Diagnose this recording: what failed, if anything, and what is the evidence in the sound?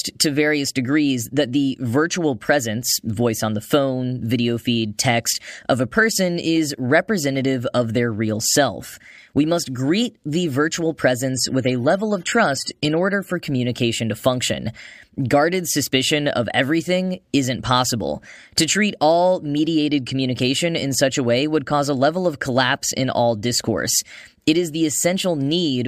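The failure is at the network stage: an adaptive stream at a lower bitrate. Right after "must greet the virtual", at 11.34 s, the speech suddenly loses its top end. Nothing remains above 13.8 kHz, and codec artefacts become audible. There is no gap. Full quality returns abruptly at 13.34 s, just before "communication to function". The slowed connection made the player switch to a leaner encoding for 2 s. The sound fits AAC dropping from about 96 to 32 kbit/s.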